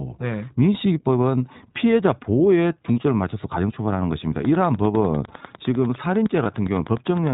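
Throughout, the speech carries the narrowband, slightly rough and synthetic quality of the iLBC codec, with nothing above 4 kHz, which points to its 20 ms, 15.2 kbps mode.

From 4.45 to 7.28 s a regular train of clicks ticks at about 9.9 per second, roughly thirty alike pulses, some about 5 dB above the speech. They continue through pauses, which sets them apart from codec roughness. Interference or a struggling interface is the likely cause.

From 6.44 to 6.47 s one lost iLBC frame, about 20 ms, is filled with a brief buzzy, held-vowel sound. Unlike a click, it replaces the speech, which recovers at once.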